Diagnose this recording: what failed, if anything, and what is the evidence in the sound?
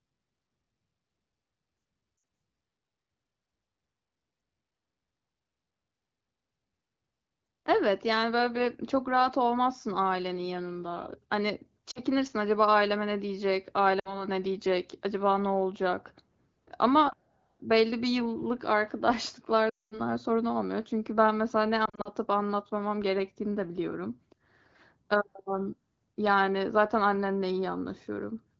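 Lost AMR speech frames, at the network stage: radio errors corrupted frames on the way to the AMR wideband decoder. Brief dips and warbles sit at 2.17–2.23 s, 11.91–11.99 s and 13.99–14.25 s. The worst is 19.69–20.01 s, about 220 ms, where the sound drops to near silence within two frames. From 21.86 to 22.09 s short gaps are scattered. The decoder repeated its last good pitch and vocal-tract settings with falling gain, so the sound returns weak or rough.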